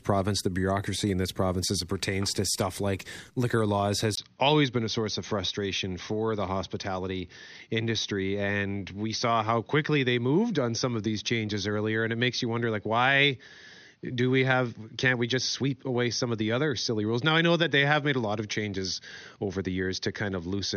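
After "stuff like liquor laws", at 4.15 s, a 20 ms gap, a new faint hiss and duller, quieter sound capped at 6.4 kHz point to an input likely switched to a poorer device, not mere filtering.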